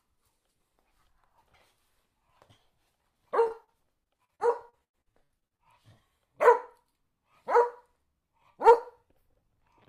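From 3.43 to 5.61 s, repeated packet loss keeps interrupting the stream; each short hole, up to 92 ms, is patched by extending earlier sound, leaving choppy, robotic audio.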